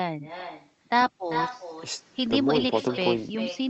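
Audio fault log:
throughout echo with no canceller: the speech is shadowed by a second copy roughly 0.4 s later and about 10 dB quieter, and thin, because the far-end loudspeaker is picked up by its own microphone and sent back over the call with nothing cancelling it.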